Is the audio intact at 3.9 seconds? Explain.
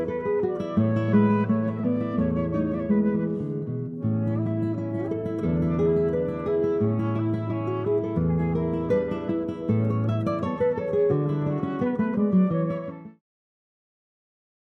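Yes, the audio is intact at 3.9 seconds, with no fault heard there.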